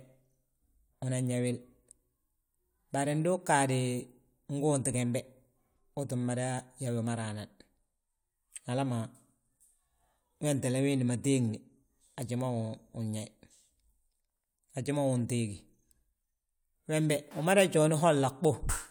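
Nothing in this recording stands out as a technical fault, so there's no problem to point to anywhere along the way.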